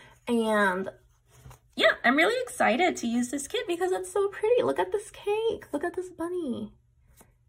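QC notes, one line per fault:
No faults found on the full listen; nothing to log.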